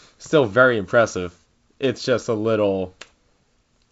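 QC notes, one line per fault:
No faults heard.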